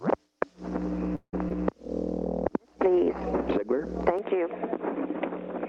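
At 1.15 s the sound stalls in a call audio freeze lasting until 1.34 s. The receiver first extends the last sound as a decaying buzz, then holds about 90 ms of silence before playback resumes. The 176 ms stall is likely the result of packets being delayed in transit until the jitter buffer ran dry. Nothing is lost: the audio continues exactly where it stopped, now 176 ms later than before.

Shortly after, at 1.49 to 1.51 s, a short concealed packet loss occurs. About 50 ms of audio never reached the decoder. Only around 13 ms of synthesised continuation covers the hole before the signal rejoins the real stream, so it is heard as a quick smear rather than a gap. Skipping the rest of the missing stretch pulls the playout delay back by roughly 40 ms, recovering part of the lag added by the freeze.

From 2.62 to 3.05 s a jitter buffer slow-down is audible. To rebuild its reserve, the receiver repeats individual pitch periods and fragments of quiet passages, adding 38 ms over this stretch. 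Playback drops to 93% speed with the pitch unchanged, so sounds are slightly drawn out. The slow-down reads as a mild stretching of timing, not a discontinuity.

At 4.19 s the input switches to a poorer device and stays there to the end. The most likely cause is a change to another microphone or to a headset call profile. With no silence at the switch, the sound turns dull and boxy in an instant, with nothing above 3.8 kHz, whereas the call path before it extends to about 12 kHz, which fits Opus at around 40 kbps. The level drops by about 5 dB, and a new noise floor appears roughly 30 dB below the signal.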